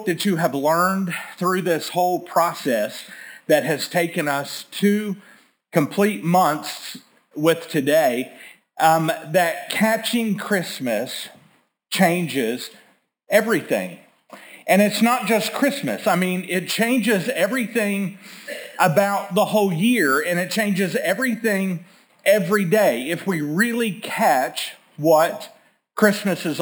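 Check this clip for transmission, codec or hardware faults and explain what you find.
One fault runs through the whole clip: imaging from sample-and-hold upsampling. The audio was raised from a 12 kHz rate to 48 kHz by repeating each sample with no smoothing filter, so mirrored copies of the spectrum sit around multiples of 12 kHz, with the lowest image spanning 6 to 12 kHz at about 17 dB below the signal. It is heard as a bright metallic fizz that rises and falls with the sound, its lowest component sliding opposite to any pitch movement.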